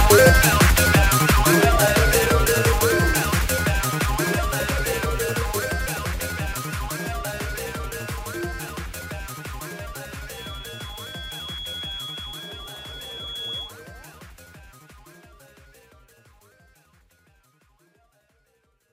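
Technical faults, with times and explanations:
10.28 to 13.74 s, feedback whistle: a thin, steady tone at 3.4 kHz sits about 15 dB under the main sound, swelling and fading slowly in level before it stops. The likely cause is a loudspeaker-to-microphone loop held just at the edge of feedback, so one frequency keeps ringing without running away. On a spectrogram it shows as a narrow horizontal line at 3.4 kHz across those seconds. The waveform barely changes, since the tone is low in level.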